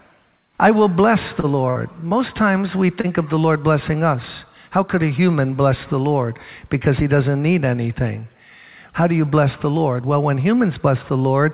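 At 1.40 to 1.46 s, 2.09 to 2.14 s and 3.01 to 3.07 s there is short concealed packet loss. Each time, about 30 ms of audio never arrived. The receiver extended the preceding sound for 20 to 30 ms and blended back, leaving a brief smear or wobble. On a spectrogram these show as smoothed, repeated-looking slices, with no gap in the waveform.

From 1.70 to 1.79 s, a burst of packet loss removes about 60 ms. The receiver continued the last sound for roughly 55 ms while fading it, which gives a held buzz or fading hiss, and then the audio jumps ahead. The waveform shows a decaying stretch, and the spectrogram shows frozen, dimming bands. The whole call path stops at 4 kHz, a limit that fits G.711 A-law.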